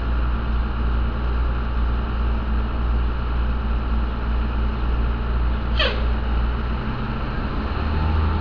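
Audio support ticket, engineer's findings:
Nothing stood out on listening; no faults found in the audio.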